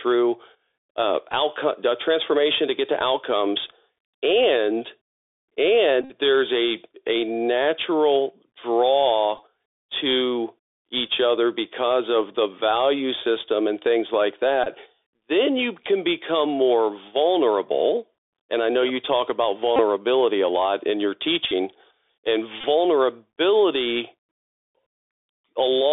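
Throughout, the speech comes through a Bluetooth CVSD headset codec at 64 kbps. Each sample is a single up-or-down step whose size adapts, and the line passes only 300 Hz to 3.6 kHz. The damage is plainly audible: a granular hiss sits under the voice, and sibilants turn scratchy where loud high content outruns the step size. That hiss and slope distortion set it apart from a plain telephone band-limit, which sounds muffled but clean.

The first Bluetooth headset packet repeated event runs from 6.02 to 6.11 s, just before "there's a a". About 71 ms of audio is lost, scattered over roughly 83 ms, and the longest stretch lasts about 50 ms. In that stretch the chip decodes the previous packet's bits again every 3.75 ms, which produces a steady buzz near 267 Hz. A dropout would leave silence here, so the pitched buzz is what tells the two apart. Shorter repeats follow at 9.38 s and 11.07 s, each about 11 ms and heard as small ticks. 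Longer ones of about 22 to 26 ms come at 14.64 to 14.68 s, 19.76 to 19.80 s, 21.48 to 21.52 s and 22.61 to 22.65 s. Each of these gives a brief buzzy catch.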